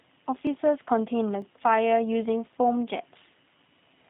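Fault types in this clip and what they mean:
G.729 codec: the low-bitrate VoIP coder, about 8 kbit/s here, rebuilds speech from a model, leaving it rough and synthetic with nothing above 3.8 kHz.
Block of digital silence: tiny stretches of samples zeroed out, under 2 ms each, so they come across as quick ticks rather than audible holes.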